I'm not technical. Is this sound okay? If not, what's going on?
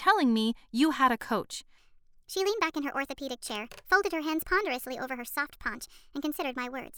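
No. After "you had a coach", from 1.78 s to the end, there's a section at the wrong speed. The speech plays 1.37 times too fast and sounds about five semitones higher, likely from a mismatched playback clock.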